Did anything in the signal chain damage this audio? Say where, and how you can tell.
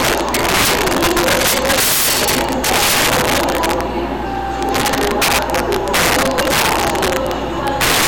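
Yes, there's integer overflow throughout, and it happened at a gain or sample-format conversion stage working in fixed-point integers. The audio was pushed about 19 dB too hot, and instead of clamping, every peak past full scale wrapped around to the opposite sign. You can hear it as harsh, snapping cracks on each loud moment, far nastier than ordinary clipping. Around 7 percent of the samples went over, so those cracks are frequent.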